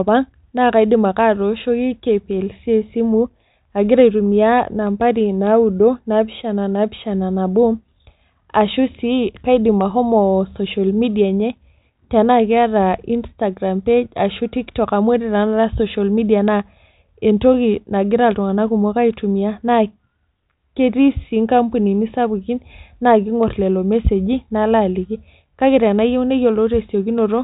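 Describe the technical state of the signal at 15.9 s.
At 15.9 s the speech is intact, with no fault present, only the G.726 telephone band that carries nothing above 3.8 kHz.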